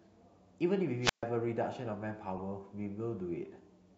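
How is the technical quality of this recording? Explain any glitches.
Two faults affect the recording. A wireless microphone squelch dropout at 1.02 to 1.24 s brings a rise of hiss as the radio signal fades, then the receiver mutes for about 136 ms. The waveform shows a flat gap, and the spectrogram a blank column. A corrupt frame decoded at 2.36 to 2.41 s plays damaged data from a few frames as a faint glitch peaking around -35 dBFS, visible as a short smear of misplaced energy.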